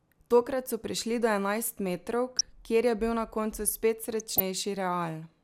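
At 2.29 to 2.48 s, and again at 4.13 to 4.40 s, the speech breaks into DAB burbling. Residual bit errors, at a rate of a fraction of a percent, slip past error correction into the MP2 stream. Corrupted samples put short blips of noise into single sub-bands, and corrupted scale factors make individual sub-bands jump in level for up to a frame. The result is a burst of burbling over the speech, lasting several frames each time, with the second burst longer.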